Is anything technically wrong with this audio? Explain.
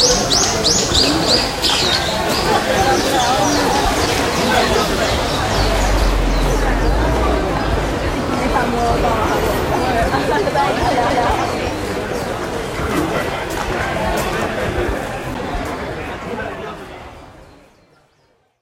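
Yes. The audio has three CD skips, at 4.06 s, 11.10 s and 15.34 s. In each, the player's laser lost its track and landed on another turn of the disc's spiral, so playback briefly muted and then resumed from a different point. The mutes are very short, a few milliseconds for the first two and roughly 10 ms for the third. Each is heard as a small tick, after which the sound abruptly continues from somewhere else rather than where it left off.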